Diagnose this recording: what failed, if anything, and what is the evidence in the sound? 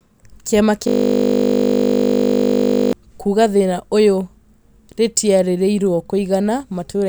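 System hang loop at the driver and buffer stage: the system froze, and from 0.88 to 2.93 s one 20 ms slice repeats as a steady 50 Hz buzz.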